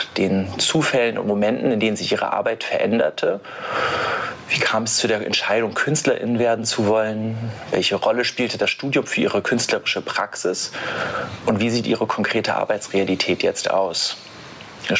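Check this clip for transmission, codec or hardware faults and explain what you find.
There is one fault, gain pumping, and it runs through the whole clip. The microphone gain was likely set far too high, so a fast limiter clamps down on every loud sound and releases in the gaps, giving a swing of around 25 dB. Loud and soft parts end up closer in level, leaving everything squashed and flat. Unlike a noise gate, it pulls loud sounds down rather than cutting quiet ones out. The call microphone processing, with nothing above 8 kHz, is normal.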